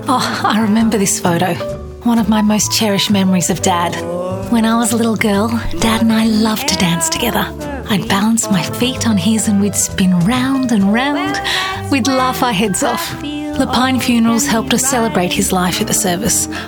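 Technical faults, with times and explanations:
No technical faults are heard, so there are no times or explanations to give.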